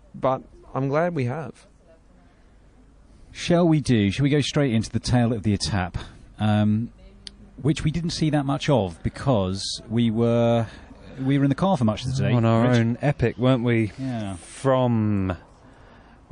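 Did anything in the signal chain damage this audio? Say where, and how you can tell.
Yes, at the codec stage. The whole clip carries plainly audible lossy damage: there's a watery swirl as weak frequency lines flicker in and out between frames. That's likely MP3 compression, and the heaviness points to roughly 40 kbps.

There's also a pre-echo at 3.83 to 3.85 s. About 25 ms of hiss, about 11 dB up, sits just ahead of a sharp attack. The noise for the loud hit got spread across a long block, around 52 ms, with no switch to short blocks, so it leaks backward into the quiet.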